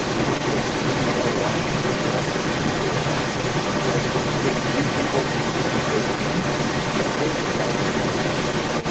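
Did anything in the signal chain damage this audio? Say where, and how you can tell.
Yes. Across the whole clip, from 0 to about 8.9 s, the other side's voice leaks through alongside the speech, at a level comparable to or a little above the main talker. The damage sits at the call-processing stage, most likely an echo canceller that left part of the loudspeaker signal in the microphone feed. On a spectrogram a second set of harmonic stripes overlaps the main one within the call band, which tops out at 8 kHz.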